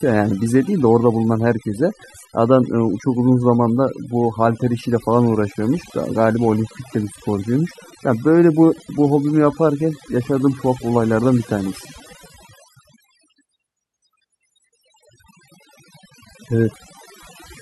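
Overdone noise removal runs throughout: an over-aggressive denoiser cuts bands near its noise estimate, leaving near-silent gaps with twinkling specks. On a spectrogram, scattered isolated dots replace the noise floor.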